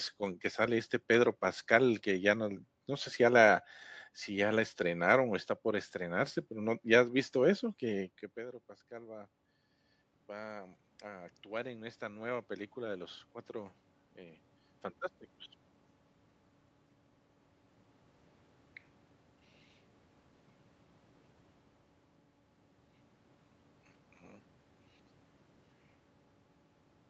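Speech heard through a call, with nothing above 8 kHz, has automatic gain rising from 10.26 to 14.47 s. After the talker moves away around 8 s, the gain climbs about 8 dB, swelling voice and room noise together as a slowly widening waveform envelope.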